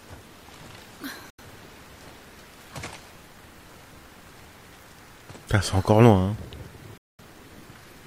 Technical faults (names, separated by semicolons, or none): digital broadcast dropout